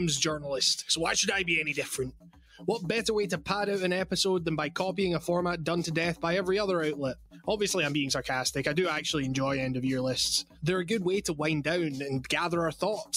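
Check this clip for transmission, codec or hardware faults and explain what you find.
Two related faults come from a speech noise suppressor left active on non-speech audio.

Noise suppressor applied to music or sounds, throughout: the suppressor treats sustained and ambient content as noise and keeps adjusting its gain. That makes the level swing by about 5 dB, so the sound pumps and thins as held parts and tails are pulled down while attacks pass.

Sound cut by the noise suppressor, at 2.1 to 2.63 s, 7.14 to 7.47 s and 10.43 to 10.64 s: in each stretch the suppressor classified the sound as noise and cut it harder than elsewhere, by as much as about 16 dB. The audio sinks in level.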